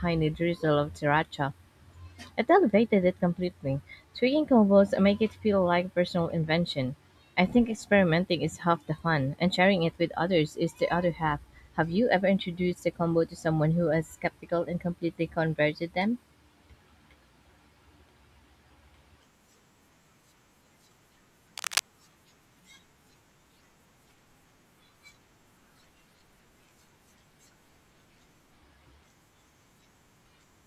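From 21.57 to 21.88 s the speech is overlaid by cable scratch noise, a dense, uneven scratching only a little below the speech level, likely from a worn cable or connector being moved. Unlike a single click or crackle, it is a continuous rustling burst.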